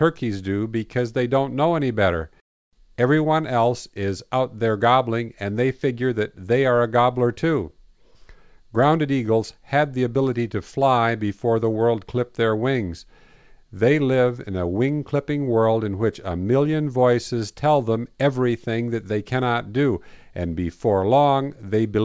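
Aliasing runs throughout the speech. Energy above 8 kHz folds back downward and lands at wrong, unrelated frequencies, because the rate dropped from 48 kHz to 16 kHz with no low-pass filter in front of the conversion. Sibilants turn gritty and metallic, with faint alias components well below the speech level.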